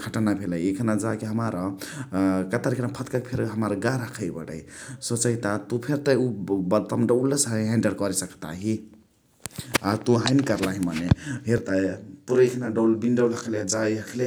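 Channel delay (comb filtering) sets in at 11.58 s and runs to 14.26 s. One channel lags the other by around 20 ms, and summing them to mono cancels shared content at evenly spaced frequencies from roughly 20 Hz upward, leaving the speech rough or slightly doubled.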